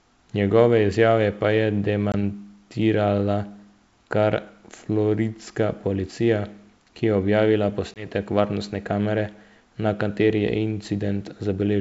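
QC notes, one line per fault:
2.12–2.14 s and 7.94–8.07 s, packet loss on an ADPCM call: about one packet, 20 ms of audio, drops out each time, after "izjave pa je" and then after "policija ki je objavila", leaving a hard-edged silent hole. The receiving ADPCM decoder's adaptive predictor and step size then no longer match the sender's, so the speech resumes with brief, slight distortion, settling back within tens of milliseconds, before "varnostne kamere na kateri" in the second case.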